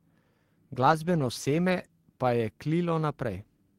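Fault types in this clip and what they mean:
Call bitrate drop: the connection's bandwidth estimate dipped, so the encoder was pushed from 32 kbps down to 12 kbps and had to spend far fewer bits on the speech. You hear it from about 0.83 s to 1.97 s, bottoming out for roughly a second. The sound goes coarse, and the top end gets chopped off, from a 20 kHz range down to 8 kHz, so it turns muffled until things recover right before "pa je".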